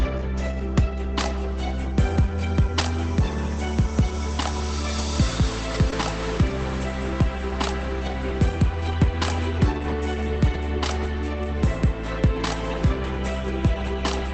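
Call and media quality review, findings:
Lost packet rebuilt from error correction, 4.98–5.00 s: 20 ms of rougher, noisier audio, no gap. Opus in-band FEC. The following packet carried a low-bitrate copy, which the decoder played in place of the lost frame.

Same at 5.74–5.76 s: 20 ms rough, noisier patch, continuity kept. Same mechanism, a coarse redundant copy substituted for the missing packet.

Same at 5.92–5.94 s: 20 ms FEC-rebuilt frame, grainy texture, overlapping the concealment event below.

Short concealed packet loss, 5.90–5.94 s: brief smear/wobble. About 20 ms missing at the decoder, roughly 15 ms synthesized by the jitter buffer/decoder concealment, which extended the preceding sound and then cross-faded into the FEC-rebuilt frame at 5.92 s. Band-limited to 8 kHz by the Opus call path; its coding noise fits a low bitrate.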